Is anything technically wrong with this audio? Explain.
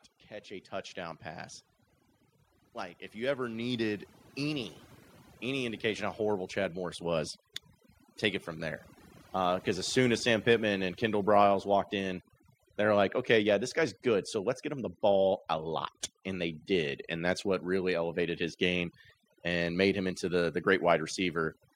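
Yes, two things are going on in this speech recording.

Overdone noise removal runs through the whole clip. The noise reduction was pushed too hard, so any frequency band sitting near its noise estimate gets pulled way down or switched off entirely, and the quieter bits of the voice get caught too. What you hear is a background that has dropped and broken up into little twinkling, warbling specks.

Automatic gain rising shows up from 3.13 s to 9.94 s. The gain control decided the input was too quiet and slowly cranked its gain, by about 11 dB over those nearly seven seconds. Because it's one gain applied to everything, the voice and whatever's left of the background swell up together. It's a slow lift rather than a jump, so the level just creeps noticeably louder across that stretch.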